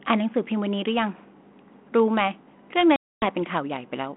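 A speech clip over a G.726 ADPCM phone line with packet loss: from 2.96 to 3.26 s about 260 ms drops to hard-edged silence, which points to a dozen or more lost packets. The decoder's predictor and step size lose track, so speech comes back with some distortion before settling.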